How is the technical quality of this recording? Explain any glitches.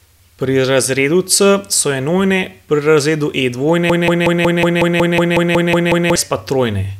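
The quality is marred by one serious glitch. From 3.90 s to 6.16 s, the speech stutters in a broken-record loop: a 184 ms fragment repeats twelve times back to back. Likely cause: a stalled player or stream resending its last buffer, so the speech meant for that stretch is lost.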